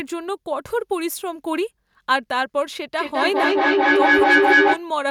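A speech recording with feedback echo between two devices from 2.98 to 4.86 s. A second device in the same room replays the call, and its sound re-enters the microphone at an interval of about a fifth of a second, which no single echo canceller removes. The loop gains instead of decaying, peaking about 7 dB above the speech. A waveform shows stacked copies piling up, while a spectrogram shows thinning, ringing bands repeating at that spacing.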